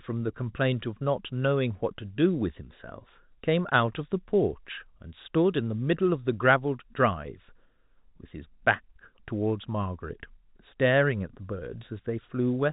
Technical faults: none

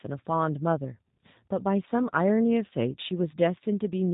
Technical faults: G.729 codec

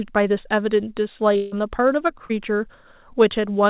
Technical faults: long network dropout; short concealed packet loss

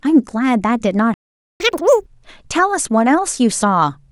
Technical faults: playback stall; catch-up at higher speed

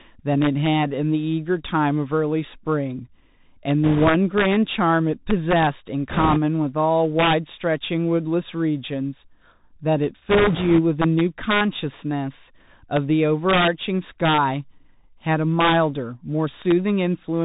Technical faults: integer overflow; Bluetooth CVSD headset codec; bit errors on a Bluetooth voice link

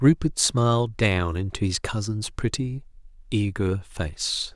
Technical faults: none

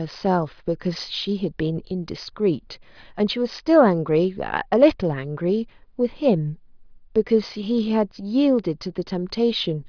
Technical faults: none

